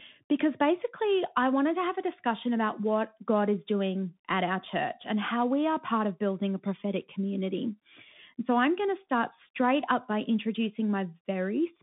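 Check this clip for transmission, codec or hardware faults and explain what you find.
Found one fault, and it runs through the whole clip. It's the Bluetooth CVSD headset codec. One-bit up/down coding, which fits a 64 kbps stream, makes s sounds come out scratchy over a grainy hiss, and the speech is confined to 150 Hz to 3.6 kHz.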